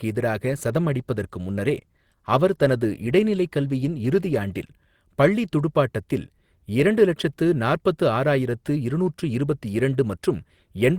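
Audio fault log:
0.38–4.77 s, call bitrate drop. The speech turns rough and watery, then clears just before "பள்ளி துடுப்பாட்டத்தில் இரண்டு லட்சத்து". The encoder was given fewer bits and coded more coarsely. The sound fits a fall from 32 to 18 kbps, held low for about 4.3 s.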